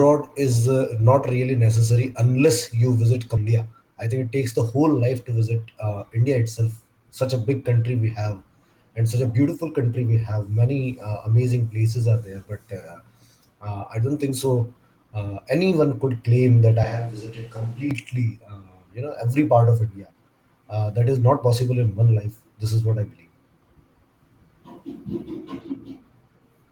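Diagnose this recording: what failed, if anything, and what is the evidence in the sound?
Right after "necessary unless you visit", around 3.37 to 3.52 s, there's a skip ahead. The speech jumps forward with only a tiny gap of about 18 ms and no fill, and something like 0.4 s of talk never arrives. The two sides are butted together almost directly. That's a network or jitter-buffer problem: a chunk got dropped, either in transit or when the buffer overflowed, while later audio was already queued, so playback just carried on from there.

Half a second later, from about 3.95 to 4.28 s, leading into "it takes the whole", you get a jitter buffer speed-up. The speech runs at roughly 110% speed at unchanged pitch, so it sounds a bit rushed. The buffer had built up more audio than it wanted and trimmed out short pitch-period slices, a few tens of milliseconds in total, to claw the delay back down.

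At 16.83 s, just after "could claim that i", there's a switch to a distant microphone lasting until 17.91 s. The sound abruptly goes roomy and hollow, drops around 10 dB in level, and room noise rises to roughly 30 dB below the speech. The change back is equally sudden. That's a capture-stage issue, likely the close mic's feed cutting out and the recording falling back to a farther mic for that second.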